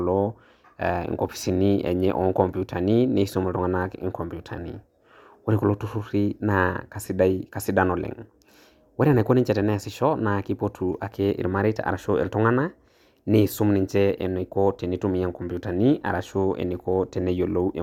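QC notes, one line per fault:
Nothing stood out on listening to the speech.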